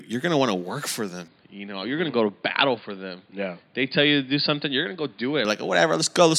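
From 1.28 to 5.45 s the speech turns dull and somewhat quieter, losing everything above 4.8 kHz. A faint new background noise appears, then clears: likely an input switched to a poorer device.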